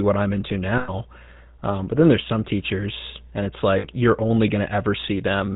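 From the start, the whole speech clip runs through the GSM full-rate codec, and its damage is plainly audible. The codec models the voice as a filter excited by a sparse pulse train, keeping only a third of the excitation detail, which points to the old 13 kbps mode. Nothing gets through above 4 kHz, so it sounds dull and band-limited, with that buzzy, gravelly grain all the way through.

Then come two spots of lost GSM frames. At 0.78 s, right after "I'm into", about 0.12 s goes missing, which fits a run of five 20 ms frames. The decoder just keeps replaying the last good frame, so you hear a short metallic, rough ring instead of the sound. At 3.78 s, after "some teachers and it's", a shorter loss of about 0.1 s, roughly three frames, does the same thing before "you're only" picks back up.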